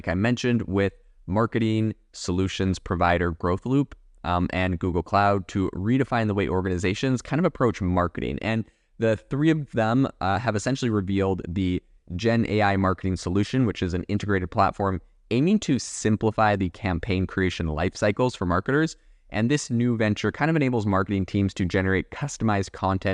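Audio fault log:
20.91 s dropped samples: a single sharp click with no audible gap, likely from a handful of samples, far under a millisecond, going missing and making the waveform jump.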